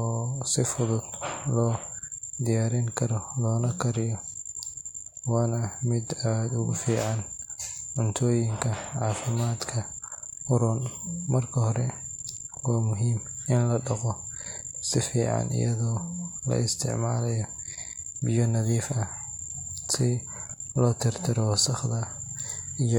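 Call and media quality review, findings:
No faults found in the speech recording. Nothing to action on this ticket.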